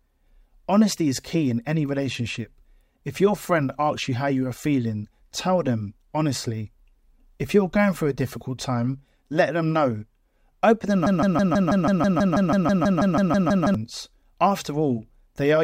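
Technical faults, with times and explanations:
11.07–13.75 s broken-record loop: one 0.16 s fragment repeats 16 times, back to back. A stalled player likely kept resending it. The speech there is lost.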